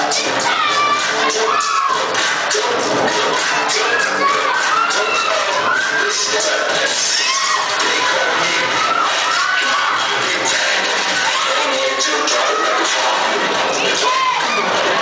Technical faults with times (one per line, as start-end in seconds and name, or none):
0.00-15.01 gain pumping